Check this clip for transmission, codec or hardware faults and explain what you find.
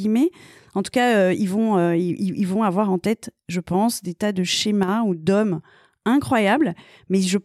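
There's one fault, a brief one. From 4.83 to 4.88 s the speech level drops abruptly by about 6 dB for 50 ms, then snaps back. That's likely one channel drops out: the mono sum halves, losing about 6 dB, and anything only in that channel vanishes.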